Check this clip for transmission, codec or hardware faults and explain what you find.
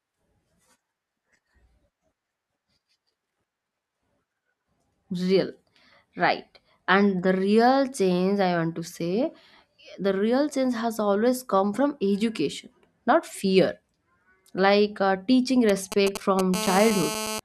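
Two radio-interference faults from a nearby 2G phone appear at the end of the speech, one directly after the other.

GSM signalling bursts, 15.69 to 16.54 s, just after "uh teaching": the audio circuit rectifies the phone's brief radio bursts into galloping ticks and short 217 Hz buzzes, close to speech level. Their intermittent grouping distinguishes them from a continuous buzz.

GSM phone buzz, 16.54 to 17.40 s: the phone now transmits steadily, 217 times a second, as in a call. The result is a hard, raspy, harmonic-rich 217 Hz buzz about -6 dB relative to the speech. It is unbroken, unlike the preceding bursts.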